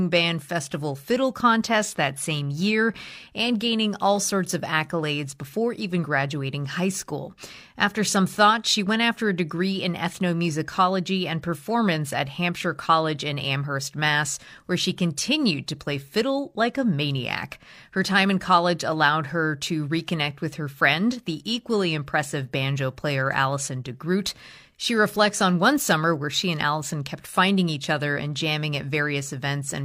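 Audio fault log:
No faults are audible anywhere in the speech recording.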